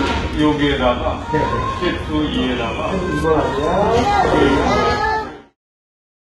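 HE-AAC compression runs through the whole clip, and this is the likely cause of its synthetic top end. The codec keeps only the lower part of the spectrum and rebuilds the treble by copying lower bands upward under a coarse envelope, so the highs stay bright but do not belong to the original sound. Here the damage is heavy. Upper detail sounds gritty and metallic, and nothing is present above 11.8 kHz, which fits a very low bitrate of around 16 kbps.

A doubled audio track enters at 4.25 s and lasts to the end. From that point a second, full-band copy of the same audio trails about a second behind the original, at about 5 dB lower. Its likely cause is the sound being captured twice through paths with different delays, or an edit that leaves two copies out of step. The copy has no decay or room colour, and it starts abruptly rather than building in. It continues beneath the smooth fade-out that runs from roughly 4.5 s to 5.57 s.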